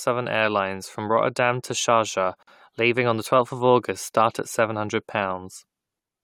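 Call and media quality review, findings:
Gap at a join of encoded pieces, speech, 2.43 to 2.47 s. Abrupt 46 ms silence, edges smeared, speech resumes where it stopped. Probable component: segment concatenation after encoding. Untrimmed encoder start delay and last-frame padding. Joins likely every 6 s. Check segmenter trimming.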